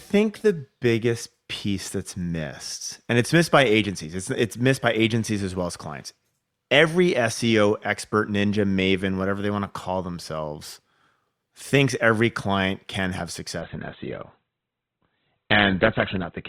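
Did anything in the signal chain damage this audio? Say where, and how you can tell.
Yes. From 13.61 s, right after "every client can have", the speech abruptly loses its treble and turns thin, with nothing above about 4.4 kHz, and it stays that way to the end at 16.49 s, with no gap at the switch. This is an adaptive stream at a lower bitrate, a network-stage fault: the player switched to a cheaper encoding when throughput fell, which fits a drop from about 64 kbit/s to 12 kbit/s Opus.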